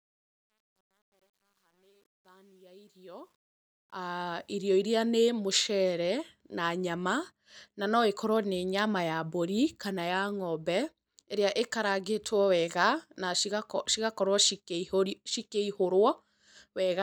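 From 0.0 to 4.56 s the fade-in shows truncation distortion: the quiet start, worst until 3.48 s, turns gritty, which fits an undithered stage of about 10 bits. Unlike a noise gate, the grit follows the fade's rising level.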